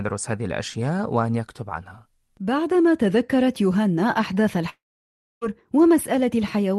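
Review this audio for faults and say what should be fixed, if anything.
From 4.69 s to 5.44 s the speech breaks into a fading buzz, then about 0.63 s of near-silence, and resumes with 0.72 s lost: a long network dropout, likely packet loss. Prevent it with Opus in-band FEC, redundancy, and a steadier link.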